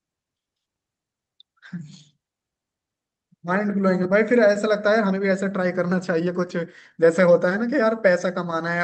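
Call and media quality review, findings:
Jitter buffer speed-up at 4.83–6.58 s: speech noticeably hurried, 109% speed, roughly 150 ms of audio trimmed. Milder recurrence at 7.02–8.02 s: 105% speed, about 50 ms removed. Receiver jitter buffer draining excess delay by repeatedly cutting pitch-period-sized pieces. Pitch stays put, which rules out a resampling or clock-rate error, where pitch would rise with tempo. No gaps, clicks or smeared tails, unlike loss concealment.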